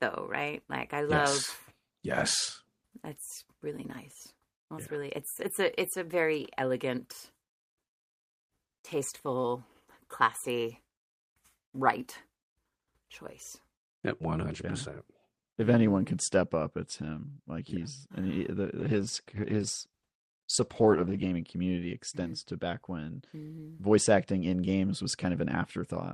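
A call bitrate drop runs from 18.82 s to 21.43 s. When the call's bandwidth estimate falls, the encoder is forced onto a much smaller bit budget. The speech here becomes coarser and watery for about 2.5 s, and its top end is trimmed from 20 kHz to 12 kHz. The sound points to a rate falling from roughly 32 kbps to 14 kbps before recovering.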